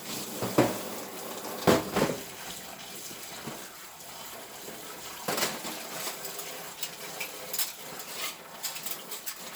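No technical faults can be heard in this recording of everyday sounds. The audio runs without any audible defect from its first moment to its last.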